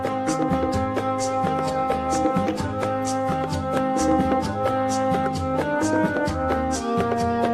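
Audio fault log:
No fault is logged for this audio.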